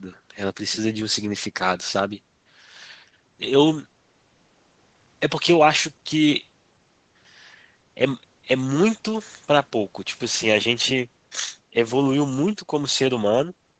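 No technical faults can be heard in this speech.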